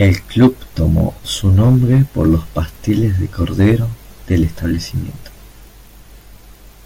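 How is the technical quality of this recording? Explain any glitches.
Hard clipping damages the speech in four stretches: 0.01 to 0.47 s, 0.84 to 1.00 s, 1.46 to 2.92 s and 3.42 to 3.74 s. In each, the level is driven beyond what the recording chain can carry, by about 6 dB at first, then about 3 dB and twice about 4 dB. The waveform peaks are sliced flat, adding high harmonics that give loud syllables a gritty, crackling edge, strongest in the opening half-second.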